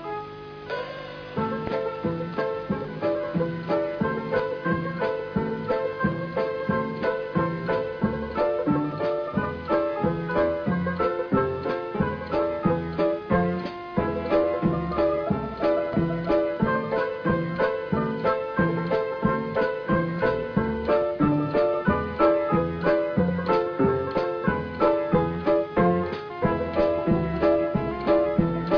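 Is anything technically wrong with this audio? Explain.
No, nothing is technically wrong with this audio.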